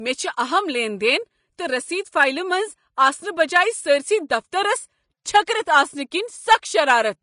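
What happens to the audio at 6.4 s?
At 6.4 s the speech has the same hissy, grainy sound heard across the whole clip, with nothing above 10.5 kHz. It's likely Vorbis compression at a rate near 34 kbps, where coarsely quantised treble turns fine detail into noise and blurs attacks.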